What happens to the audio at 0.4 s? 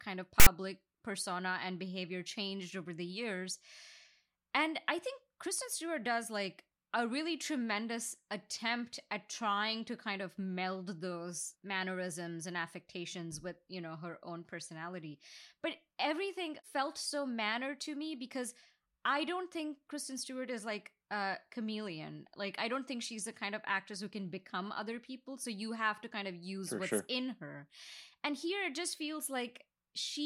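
File tags played as audio, from 0.40 to 0.47 s: a block of text metadata is being decoded as if it were sample data. The byte values land as a loud, harsh rasp sitting off-centre, a roughly 70 ms burst of static with abrupt edges interrupting the speech.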